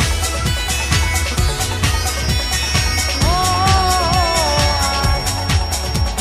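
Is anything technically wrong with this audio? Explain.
Yes. From 2.14 s to the end there is a feedback whistle: a thin, steady tone at 5.5 kHz sitting roughly 10 dB below the main sound and swelling and fading slowly in level. It is likely a loudspeaker-to-microphone loop held just at the edge of feedback, sustaining one frequency without running away. A spectrogram would show it as a narrow horizontal line at 5.5 kHz.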